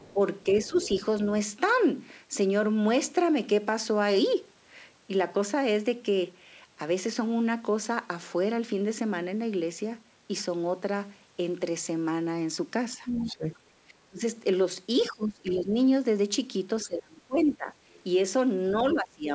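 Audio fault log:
0.00–1.01 s, other side's voice leaking through: a faint second voice, about 20 dB under the talker, sits underneath. It's likely loudspeaker echo the canceller didn't fully remove.
0.14–0.76 s, speech suppressed in double talk: the talker dips by about 10 dB in short bits, around 150 ms in all, likely the canceller ducking both voices during overlap.
12.96–15.75 s, speech suppressed in double talk: the talker keeps sinking and dropping out, up to about 20 dB down for roughly one and a half seconds in all. That's likely the canceller clamping down while both sides talk.
13.16–13.59 s and 14.99–15.60 s, other side's voice leaking through: two scraps of the far voice come through about 25 dB down, likely residual echo slipping past the canceller.
16.81–18.95 s, other side's voice leaking through: a more obvious far voice sits about 15 dB under the talker for two seconds, likely echo left in by the canceller.
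16.85–19.31 s, speech suppressed in double talk: the talker drops hard, up to about 25 dB, across roughly one and a half seconds. This is likely the canceller turning everything down while both sides overlap.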